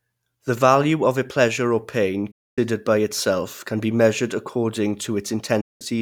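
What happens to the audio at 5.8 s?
A digital broadcast dropout runs from 5.61 s to 5.82 s, so at 5.8 s the speech is still muted and just about to return. The receiver lost the incoming stream, or frames failed their integrity check, and it silenced its output until valid frames arrived again. The sound fades out over about 8 ms and leaves a hole of about 0.2 s. That gap fits roughly six discarded frames, and the speech sent during it is gone for good.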